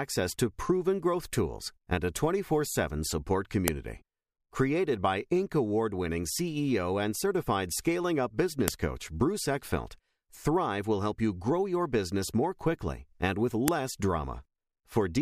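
At 3.68 s a sharp, loud click cuts through the speech. The same snap returns at 8.68 s, just after "and certified scaling up", and again at 13.68 s, after "more quickly and with". The clicks repeat every 5 seconds. This is a file header played as audio. The speech was joined from 5-second pieces, and each piece kept its header. Those header bytes were decoded as samples, so every join produces a brief burst of noise.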